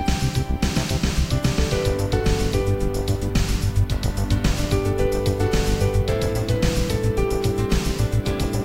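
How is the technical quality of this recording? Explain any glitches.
The technical quality is limited by one fault that runs through the whole recording: low bit depth with noise shaping. The sound is stored with only about 10 bits, so every sample is rounded coarsely. The rounding error is fed back so that it is pushed toward high frequencies. The result is a steady, thin hiss around 35 dB below the signal, strongest at the top of the band. On a spectrogram it shows as a constant noise floor that brightens toward the upper frequencies. In the waveform, quiet passages look slightly fuzzy instead of clean.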